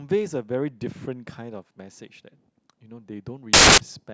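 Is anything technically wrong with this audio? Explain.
Yes, there's one clear problem. From about 3.53 to 3.78 s the speech turns into a burst of loud, harsh broadband noise. That's samples built from the wrong bytes. For that stretch the reader assembles each sample's bytes incorrectly, whether off by one, swapped or misaligned, so the rapidly changing low bits end up as the big part of every value. You get a harsh noise that is close to white on the louder sounds.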